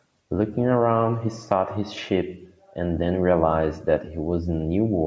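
No faults in the speech; it shows only the expected call microphone processing, with the lowest bass filtered out and nothing above 8 kHz.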